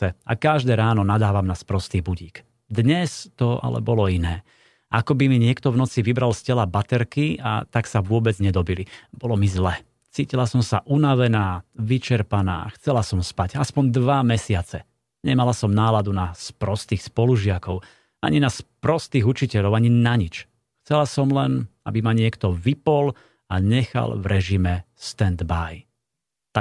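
A speech recording with no technical faults to point to. Nothing in the signal chain calls for comment at any point.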